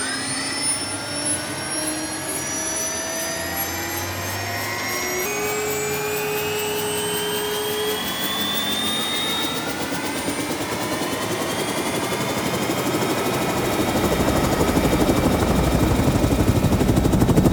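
From 5.26 s to the end, the sound suddenly runs hurried and sits about two semitones higher. This is a section at the wrong speed, playing 1.12 times too fast, which most likely comes from that stretch being fitted to a mismatched clock during editing or playback.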